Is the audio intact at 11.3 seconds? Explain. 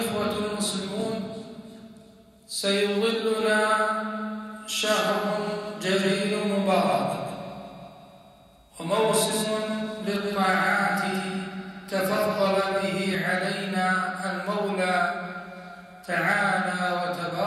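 No. At 11.3 s the clip is inside a doubled audio track that runs from 3.41 to 13.15 s. A full-band copy of the audio trails the original by about 200 ms at roughly 5 dB lower, with no decay or room colour, likely from a second capture by a slower path or an edit holding two copies out of step. On a spectrogram, each event appears twice, offset by that fixed gap. The waveform shows a duplicated envelope that starts and stops abruptly.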